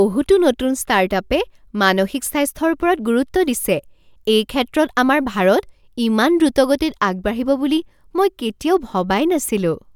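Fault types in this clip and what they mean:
No faults can be heard in this speech recording.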